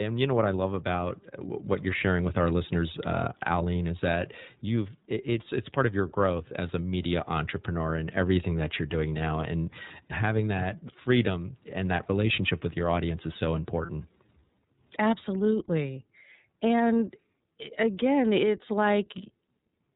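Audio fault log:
throughout: iLBC codec. The speech is narrowband, with nothing above 4 kHz, so it sounds boxed-in and thin at the top. The coder models each block of sound separately, and the rough, slightly synthetic grain fits 30 ms frames in the 13.33 kbps mode. The damage is plainly audible. Consonants lose crispness. Vowels carry a slightly rough, synthetic texture because the coder rebuilds the excitation rather than the waveform itself.
13.86 to 13.90 s: lost iLBC frames. Right after "your audience is so", a gap of about 30 ms is filled in by the decoder. It repeats the last pitch cycle blended with noise, so the hole sounds like a brief held, buzzy vowel. The gap is short and points to a single lost frame. Because each iLBC frame decodes on its own, the speech snaps back to normal immediately afterwards.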